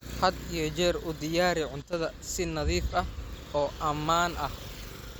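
A sudden gain jump occurs at 1.82 s, right after "iyo jeer u diyaari", where the level of the speech falls by about 11 dB from one sample to the next and stays down until 1.93 s. The background noise drops by the same amount at the same instant, so the whole signal lurches quieter rather than the talker simply softening. This is likely a digital gain change applied without any ramp, such as a level setting or bit shift taking effect instantaneously.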